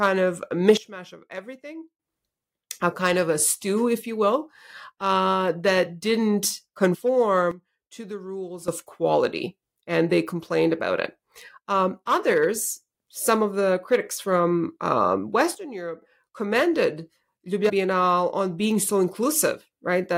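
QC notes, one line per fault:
0.77–2.00 s, 7.51–8.68 s, 15.55–16.02 s: sudden gain jump. Right after "of a" the level drops by about 16 dB. It drops by about 12 dB in the span ending just before "of quality and they", and again right after "the critics from um". Each time it snaps back at the end. The background noise falls and returns with the speech, so the whole signal was scaled, likely by a gain or bit-shift change applied with no ramp.
6.93 s, 17.68 s: compressed frames skipped. Speech jumps forward, losing about 40 ms at 6.93 s (about two 21.3 ms frames) and about 200 ms at 17.68 s (roughly ten frames). Those frames never reached playback, either missing or rejected as damaged. The skip lengths fit whole frames.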